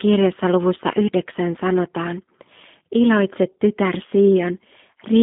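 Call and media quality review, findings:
G.729 codec, throughout: audible roughness and synthetic quality, band of 150 Hz–3.7 kHz, nothing above 3.8 kHz; CELP pulse coding, consistent with 8 kbit/s G.729A.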